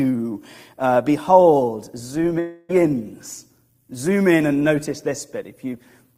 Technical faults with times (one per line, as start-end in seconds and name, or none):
2.39-2.71 long network dropout